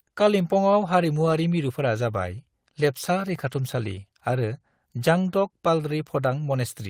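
A short speech recording with no audible technical fault. Nothing in the audio calls for attention at any point.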